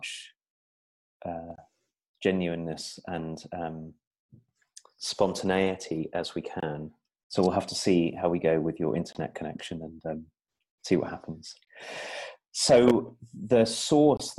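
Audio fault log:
1.56, 6.60, 9.13, 11.65 and 14.17 s: gap between chunks, 23 ms silences left at the joins between 2.5 s chunks, briefly interrupting the sound.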